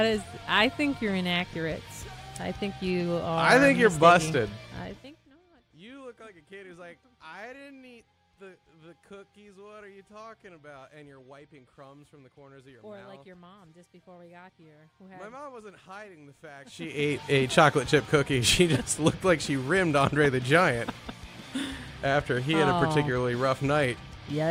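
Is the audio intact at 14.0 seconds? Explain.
Yes, the audio is intact at 14.0 seconds, with no fault at that moment.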